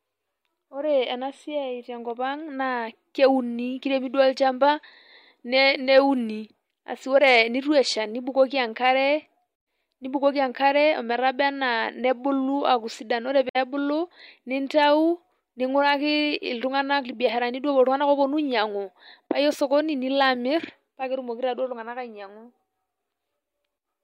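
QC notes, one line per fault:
9.60–9.66 s and 13.49–13.56 s (the second just after "sidan ore"), AAC frame loss with muting: the speech briefly vanishes into silence for roughly 64 ms each time, which fits about three lost frames. The decoder filled the missing frames with zero spectrum, and the overlapping transform windows taper the sound out and back in, so the holes have soft edges. That clean, faded silence sets them apart from a hard sample dropout, which clicks, and from concealment that repeats or smears sound.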